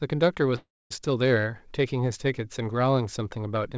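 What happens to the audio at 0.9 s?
At 0.9 s a call audio freeze from 0.56 to 0.92 s is ending. A likely stalled jitter buffer stretched the last sound into a fading buzz or hiss, then about 240 ms of silence. The audio resumes exactly where it stopped, so unlike a dropout nothing is lost.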